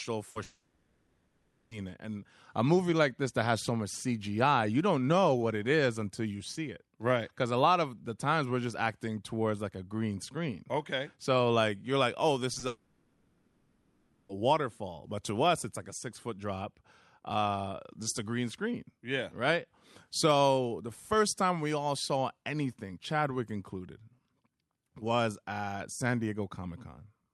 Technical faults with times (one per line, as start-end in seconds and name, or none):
0.31-0.37 short concealed packet loss
0.43-1.73 long network dropout
12.53-12.63 short concealed packet loss
12.67-14.31 long network dropout